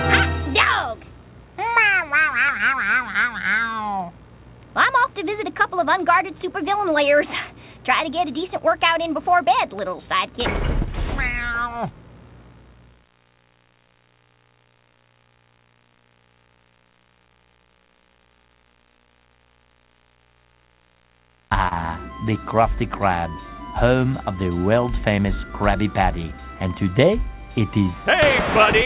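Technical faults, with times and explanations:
21.68–21.74 s, short concealed packet loss: a brief smeared wobble, the sound momentarily held and blurred before it blends back. About 30 ms of audio missed the decoder, so the receiver stretched the preceding sound across the gap, then blended into the real signal.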